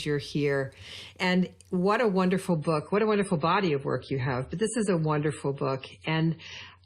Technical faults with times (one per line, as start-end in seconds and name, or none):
2.52-6.85 adaptive stream at a lower bitrate